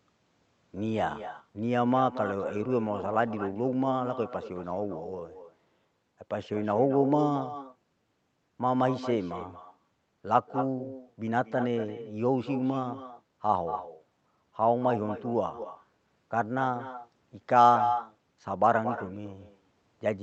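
Speech throughout the clip is trailed by a quieter, thinner copy of itself arriving about a fifth of a second later, roughly 11 dB down. That is echo with no canceller: the far end's loudspeaker feeds its microphone, and the returning sound goes unremoved.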